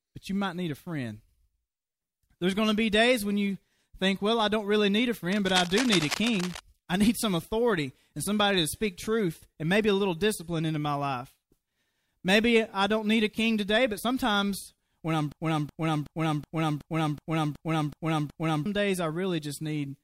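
From 5.31 to 6.59 s, just after "don't really need a" and before "I need some authority", cable scratch noise rustles over the speech at about 10 dB below it, most likely a worn cable or connector being moved. Its dense, irregular crackle marks it apart from steady hiss or isolated clicks.

From 15.32 s, after "but sometimes when I'm", a broken-record loop repeats one 0.37 s fragment nine times back to back until 18.66 s, the speech that belonged there lost. The likely cause is a stalled stream resending its last buffer. Identical repeats set it apart from an echo's fading copies.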